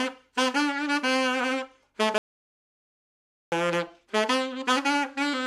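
At 2.18 s the sound cuts off abruptly into an audio dropout to silence lasting about 1.34 s, until 3.52 s. The gap is silent with no room tone. The waveform shows a flat line and the spectrogram a blank band, likely from lost input while recording continued.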